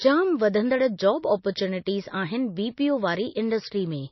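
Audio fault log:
Throughout, MP3 compression: nothing above 5.8 kHz, with watery swirling on s sounds, likely a low-bitrate encode near 26 kbps; a plain low-pass wouldn't swirl.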